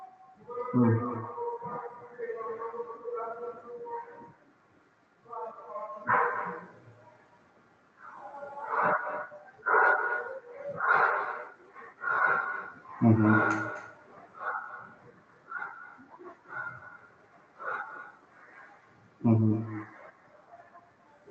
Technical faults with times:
0.00-21.30 echo with no canceller

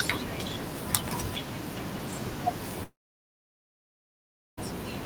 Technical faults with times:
2.83-4.59 long network dropout

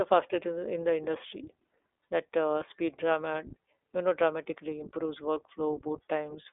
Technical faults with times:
0.00-6.53 iLBC codec

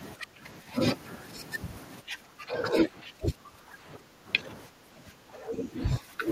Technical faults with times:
0.16-0.71 speech suppressed in double talk
2.01-6.28 speech suppressed in double talk

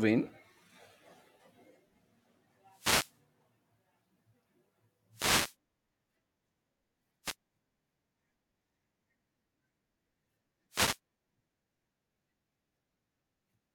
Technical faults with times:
2.68-3.21 wireless microphone noise hit
5.11-5.56 wireless microphone noise hit
7.23-7.35 wireless microphone noise hit
10.70-10.99 wireless microphone noise hit

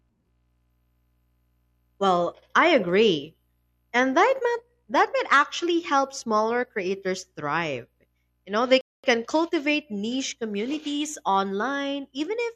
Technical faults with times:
8.81-9.04 rebuffering stall

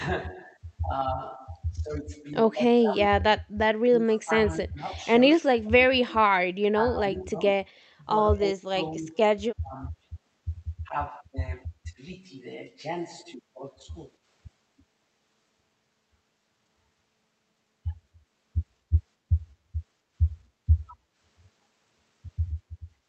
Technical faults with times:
1.32-7.66 speech suppressed in double talk
4.14-4.18 echo leak
7.69-7.80 background gated by the echo canceller
8.33-9.80 speech suppressed in double talk
10.87-11.34 speech suppressed in double talk
11.91-11.99 speech suppressed in double talk
20.92-21.01 speech suppressed in double talk

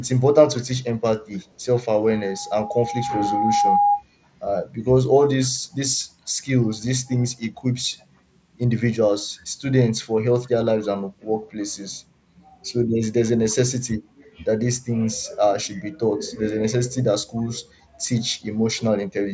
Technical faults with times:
0.03-1.65 echo leak
2.08-4.03 loudspeaker feedback squeal
5.43-5.50 echo leak
7.99-8.05 echo leak
10.43-10.49 echo leak

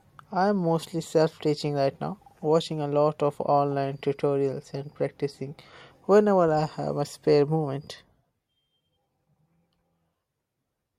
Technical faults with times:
none

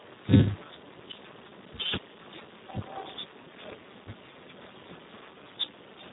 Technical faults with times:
0.00-6.12 Speex codec

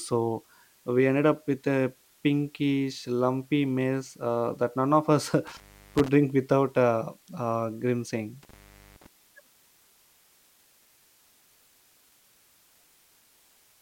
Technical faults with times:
0.00-13.81 low bit depth with dither
5.47-6.08 intermittent contact
8.43-9.06 intermittent contact

